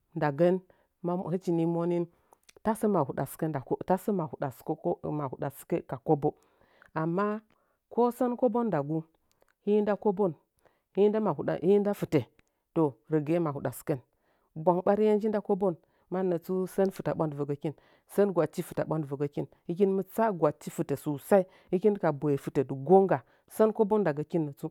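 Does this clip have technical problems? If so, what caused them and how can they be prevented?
No, there are no technical problems to point to in this speech clip. With nothing at fault, there is no cause to trace and nothing to prevent.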